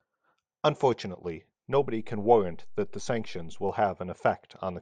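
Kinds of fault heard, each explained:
DC step: the waveform's zero line jumps by about -37 dBFS at 1.73 s and holds until 3.69 s, giving a low thump at each edge while the speech carries on unchanged. Unlike a click or dropout, nothing in the signal itself is damaged or missing.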